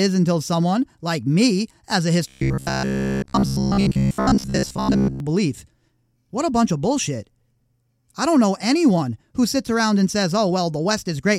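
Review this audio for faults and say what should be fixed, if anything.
From 2.28 to 5.20 s, right after "like me as a", the voice turns into a rigid, metallic buzz pitched at about 66.7 Hz that only loosely tracks the words. This is robotic sound from repeated short buffers, likely caused by audio arriving too slowly, so the player kept replaying a chunk of roughly 15 ms (one cycle of that buzz) instead of fresh sound. Most of the stretch is repetition, with the real audio skipped. To prevent it, give the input path a deeper jitter buffer or higher scheduling priority so it never runs dry.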